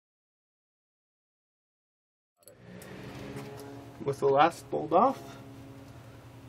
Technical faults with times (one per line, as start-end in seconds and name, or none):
none